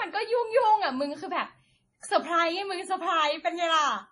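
The speech in this clip has likely been passed through more than one lossy codec, a transcoding between lossy codecs in which an early low-bitrate MP3 stage, around 32 kbit/s, was re-encoded to WMA at a higher rate of about 96 kbit/s. Throughout the recording, nothing is present above 10.6 kHz, and the artefacts of the first encode remain, overlaid with the second codec's own coloration.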